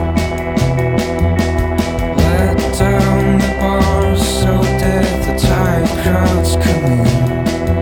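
No technical faults are audible.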